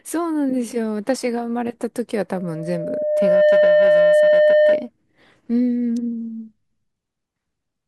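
Speech is interrupted by loudspeaker feedback squeal from 2.36 to 4.89 s. The microphone picks up its loudspeaker and the loop gain exceeds one, so a 604 Hz tone swells over about a second to around 10 dB above the speech. A spectrogram shows one bright horizontal line, and the waveform envelope balloons.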